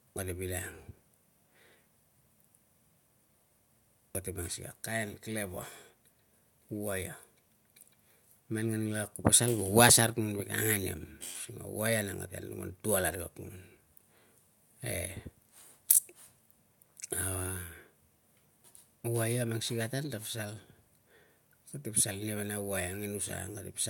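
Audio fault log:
Nothing stood out on listening to the speech in this recording.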